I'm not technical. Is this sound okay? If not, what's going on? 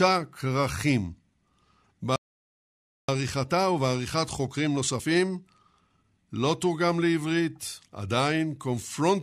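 No. A playback stall hits at 2.16 s: the speech cuts out mid-flow and there is silence for about 0.92 s, until 3.08 s. The player most likely ran out of incoming audio, or was held up by something else on the device, so it had nothing to send to the speakers. When it recovered, it carried on where the sound had stopped, leaving the listener behind the real-time stream.

Time-compressed catch-up follows from 3.08 s to 6.08 s. To make up the lost ground, the player hurries the speech along at about 1.15 times normal speed for three seconds. It does this by snipping out tiny slices of audio and blending the gaps together, so the voice keeps its normal pitch rather than sounding squeaky. The result is speech that feels rushed.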